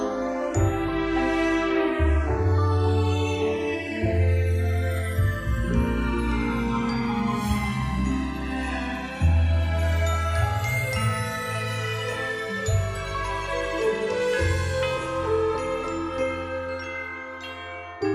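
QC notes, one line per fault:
Throughout, channels drifting apart: the two channels run on separate clocks that disagree by roughly 150 parts per million, so the delay between them slides steadily to around 3 ms by the end. When summed to mono, comb notches sweep slowly through the spectrum, producing a slow flanging.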